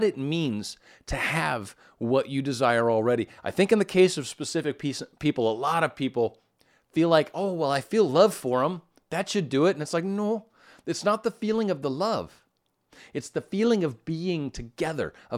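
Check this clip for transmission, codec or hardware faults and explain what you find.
No technical fault can be heard anywhere in this speech recording, and the signal reaches the listener intact and continuous.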